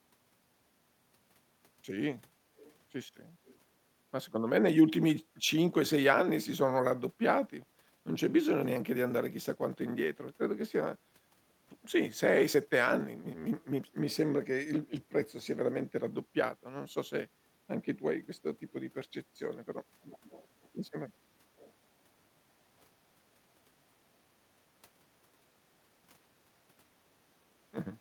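Echo leak appears at 2.57–2.75 s, 3.46–3.57 s, 20.1–20.69 s, 20.86–20.9 s and 21.57–21.73 s. A faint delayed copy of the speech, trailing it by about 406 ms, surfaces in short scraps; it sits roughly 30 dB below the speech, somewhat louder near 20.1 s and barely audible at 20.86 s. This is likely a loudspeaker playback on the far end reaching its microphone and slipping past an echo canceller that didn't fully remove it.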